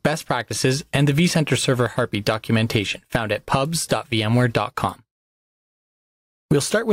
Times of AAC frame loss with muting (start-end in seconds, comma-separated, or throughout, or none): none